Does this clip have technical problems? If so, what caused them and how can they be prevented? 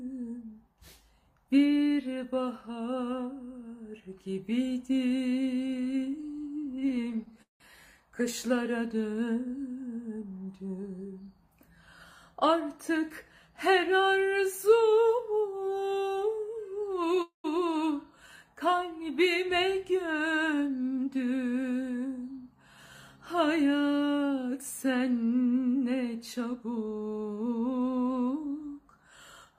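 Yes. Three kinds of fault appear.

Repeated stalls (stutter) run from 5.67 to 7.62 s, where the audio halts 28 times. About 455 ms is filled by continuing the previous sound, the longest fill lasting 180 ms, so nearly a quarter of that stretch is stand-in audio. A shorter bout at 17.05 to 17.18 s has three tiny gaps, none over 9 ms. Packets were arriving late or too slowly, so the jitter buffer kept running dry, yet nothing is lost. The audio drags rather than skips. What separates this from a freeze is the many brief, choppy halts instead of one long hold. A larger or adaptive jitter buffer, together with steadier network delivery through QoS and less competing traffic, would prevent it.

Jitter buffer speed-up occurs at 9.97 to 12.16 s (about 6% fast, with roughly 150 ms trimmed), 20.30 to 21.14 s (12% fast) and 26.55 to 27.46 s (11% fast), each of the last two losing around 100 ms. The buffer had grown past its target, so the receiver cut out pitch-period-sized slices to catch up. 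Pitch stays put, which tells it apart from a sample-rate error, and the audio simply sounds hurried. Smoother packet delivery, so that delayed packets don't arrive in bursts, would prevent it, as would gentler catch-up settings.

A call audio freeze at 17.22 to 17.46 s holds the sound for 222 ms, fading into about 120 ms of silence before the audio resumes from where it stopped. The likely cause is packets held up in transit, which emptied the buffer and added 222 ms of delay. Unlike a dropout, nothing is missing, because the sound picks up exactly where it halted. Reducing congestion on the network path would prevent it.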